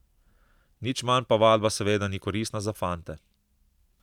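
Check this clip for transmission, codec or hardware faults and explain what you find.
No faults can be heard anywhere in the recording. There is nothing to report for any part of the speech.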